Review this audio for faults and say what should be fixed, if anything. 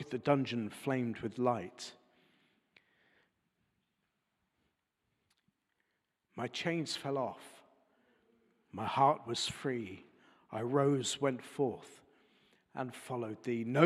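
Nothing in this audio needs fixing. No faults can be heard anywhere in the sound, so no corrective or preventive step is called for.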